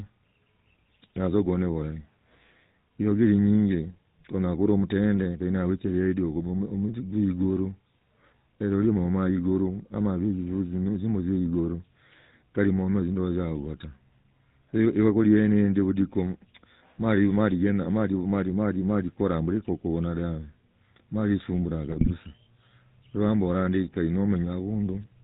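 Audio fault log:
Throughout: GSM full-rate codec. The speech has the buzzy, gravelly roughness of the original GSM coder, plainly audible across the clip. The codec models the vocal tract as a filter and excites it with a regularly spaced pulse train that keeps only every third excitation sample, so fine voicing detail is replaced by a coarse, rasping texture. Nothing above 4 kHz survives, which dulls sibilants. The character fits a 13 kbit/s full-rate stream.
21.90–22.13 s: GSM bit errors. For about a quarter of a second the speech breaks into squawks, pops and a gargling smear. Corrupted bits reaching the decoder distort the filter, pitch and gain parameters. Each damaged frame then gets a bent spectrum or a sudden jump in level. The span fits roughly eleven consecutive 20 ms frames hit, consistent with a bit error rate of around 1.5 percent on a weak radio link.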